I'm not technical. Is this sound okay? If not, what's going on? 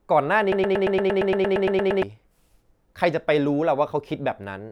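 No, there's a broken-record loop from 0.52 to 2.03 seconds: a tiny slice of the speech, about 0.12 seconds long, plays 13 times back to back. Likely the player or stream stalled and kept resending that last bit, so whatever came next is gone.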